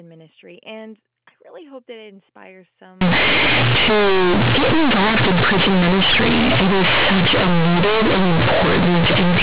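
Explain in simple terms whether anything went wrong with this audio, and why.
Something went wrong from 3.01 s to the end of the clip. The speech suddenly turns into very loud, buzzy distortion, with harsh noise even in the pauses. This is companded audio read as linear. The sound was stored in the A-law telephone format, which squeezes loudness onto a curved scale. Here those values were played back as plain 8-bit numbers without being unsqueezed. So quiet moments blow up as big as loud ones. Before 3.01 s, the normal telephone sound is clear.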